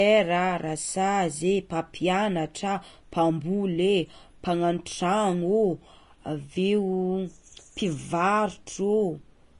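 From start to finish the speech has a hissy, grainy texture, with tones roughened and consonant onsets smeared, and nothing at all above about 10.6 kHz. This is plainly audible Vorbis compression, likely from encoding at a low rate, which fits roughly 32 kbps. At that setting the encoder drops the top band entirely and quantises the remaining treble so coarsely that its fine detail is replaced by noise of similar energy.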